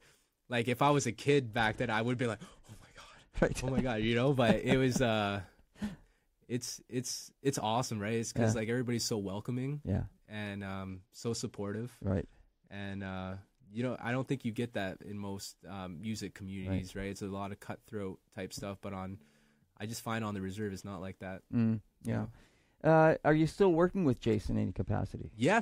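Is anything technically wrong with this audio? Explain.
Yes. Bluetooth SBC bit pool drops occur at 0.84–4.34 s, 10.89–14.30 s and 24.63 s to the end. The speech turns dull and gritty, which fits the bit pool falling from 28 to about 12, near 96 kbps. Upper sub-bands lose their bits and the rest are coarsely quantised. A spectrogram shows the treble thinning or vanishing, with a speckled noise floor.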